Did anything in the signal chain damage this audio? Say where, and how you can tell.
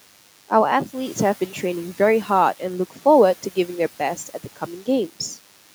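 Yes. A DECT cordless phone buzz runs throughout, entering the analogue wiring. Rectified 10 ms radio bursts make a thin 100 Hz buzz, roughly 25 dB down.

Speech was cut by the noise suppressor in call processing, between 4.16 and 4.62 s. About a tenth of a second drops by up to about 10 dB and sounds swallowed.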